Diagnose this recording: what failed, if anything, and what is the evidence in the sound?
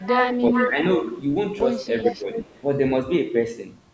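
Echo leak, in the call processing stage. A delayed copy of the speech trails the talker by about 387 ms. It is heard from 0.02 to 0.7 s and from 2.04 to 2.14 s at roughly the level of the speech itself. Quieter scraps, about 10 dB down, appear from 0.99 to 1.16 s and from 2.3 to 2.62 s. The fixed delay points to a loudspeaker path on the far end. Its echo canceller likely failed to subtract what its microphone picked up, so the residue was sent back.

Speech suppressed in double talk, also in call processing. The talker's level dips from 0.51 to 0.78 s and again from 2.04 to 2.26 s. Each stretch loses around 150 ms in total. The first drop is mild, about 5 dB. The second is deeper, about 10 dB. Both coincide with the echo being present. The canceller likely could not tell local speech from loudspeaker echo, and its suppressor pulled everything down.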